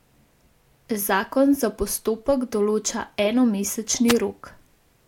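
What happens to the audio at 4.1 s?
A wireless microphone noise hit from 4.08 to 4.13 s: the FM radio signal briefly fades, receiver noise swells into a static swish, showing as a broadband vertical smear on a spectrogram.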